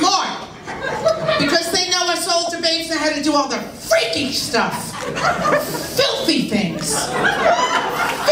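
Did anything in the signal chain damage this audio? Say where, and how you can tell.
Yes. Lost LE Audio frames on the Bluetooth link at 2.46–2.48 s and 7.47–7.50 s: LC3 concealment repeated the last spectrum with random signs, smearing sound into noise.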